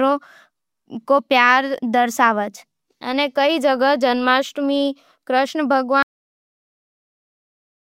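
At 6.03 s the speech is hit by a cut-off end: the recording stops partway through a sound and drops to digital silence for the remaining 1.8 s. The final stretch of audio was never written, so there is no natural decay or room tail, just an abrupt halt. On a waveform the signal ends in a vertical wall followed by a flat line; a spectrogram shows energy stopping dead across all frequencies.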